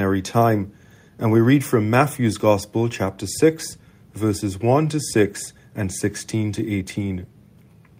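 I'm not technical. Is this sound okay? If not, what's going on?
Yes, nothing wrong here.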